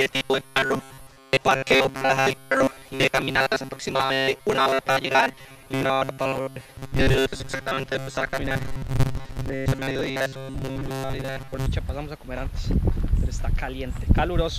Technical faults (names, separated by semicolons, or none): robotic sound from repeated short buffers